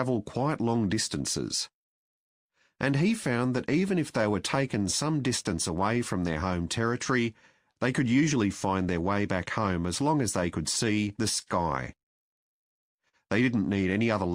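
A sender clock running roughly 3 percent slow against the receiver, a clock drift between sender and receiver, keeps draining the jitter buffer, so small timing hiccups recur unevenly through the audio. To stay in step, the receiver makes repeated timing corrections from 0.44 s to 12.87 s, repeating short pieces so the sound plays at 98 percent speed, adding about 200 ms. Twice a late packet empties the buffer and causes a short stall: at 7.72 to 7.78 s the last sound is held for 37 ms, and at 13.09 to 13.15 s for 44 ms, each a brief held moment with a faint buzz or dip but nothing missing. Between 10.41 and 11.48 s, about three scattered short gaps from late or lost packets, the longest around 40 ms, are patched by continuing the previous sound, leaving small ticks or smears.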